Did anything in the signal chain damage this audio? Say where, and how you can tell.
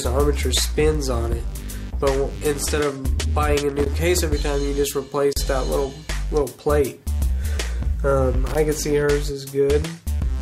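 Yes, loose connector crackle at 3.69–3.87 s and 8.47–8.55 s: in the analogue wiring, a worn contact intermittently breaks the signal, producing irregular scratchy bursts.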